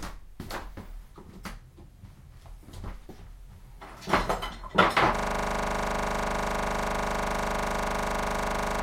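At 5.16 s the audio locks into a system hang loop that runs to the end: the system stalled while the sound hardware kept replaying its ring buffer, so one 40 ms slice repeats about ninety times, producing a steady 25 Hz buzzing rattle.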